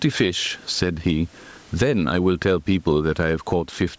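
A short speech clip with gain pumping running right through it. The room noise sits about 44 dB under the voice, and the gain swings by something like 15 dB, so the whole thing sounds squashed and breathing. The likely cause is mic gain set way too high, with a fast limiter or compressor clamping down on each peak. The call-style band topping out around 8 kHz is fine.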